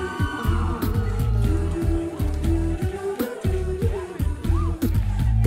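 No technical faults are audible.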